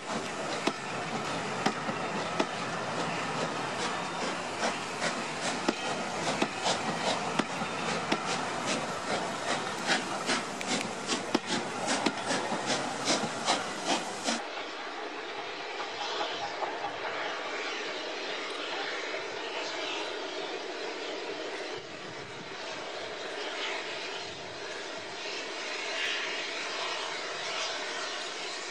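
Around 22.62 s and again at 26.06 s there are two tiny glitches from damaged data in a compressed stream. Bad bytes there trip up the decoder, which misreads those frames and has to resync, so you get a brief blip each time.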